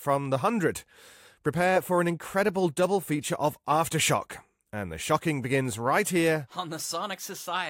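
No technical faults can be heard anywhere in this recording.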